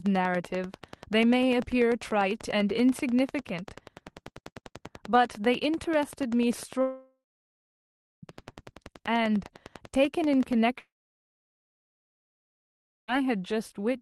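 From 0.06 s to 10.54 s a train of clicks runs under the speech, about 10.2 per second at a regular pace, roughly a hundred in all, peaking a little above the speech level. They are likely interference from nearby equipment. Unlike scattered transmission glitches, they share one shape and keep ticking through pauses.

Two long network dropouts occur, likely from lost packets. From 6.81 s to 8.25 s the last sound smears into a fading buzz, then about 1.02 s of silence. From 10.79 s to 13.10 s the silence lasts about 2.19 s. Unlike a deliberate pause, speech resumes further on with material missing.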